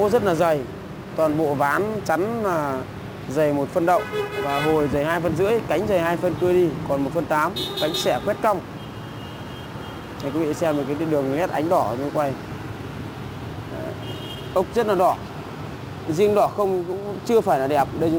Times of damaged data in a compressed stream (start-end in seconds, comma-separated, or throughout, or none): none